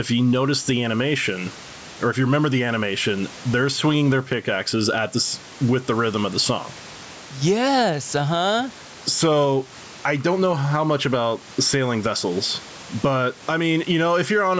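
From start to finish the speech shows gain pumping, with the gain swinging by around 10 dB. The likely cause is input gain set far too high, with a fast limiter clamping it on every peak, which squeezes loud and soft passages together. The room noise sits about 30 dB below the speech.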